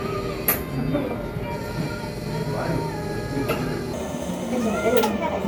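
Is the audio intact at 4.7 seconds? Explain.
No. At 4.7 s you're inside a wrong sample rate stretch running from 3.93 s to 5.48 s. The audio plays 1.5 times too fast with no conversion, which fits 32 kHz material going out at 48 kHz, so everything sounds hurried and sits 7 semitones high.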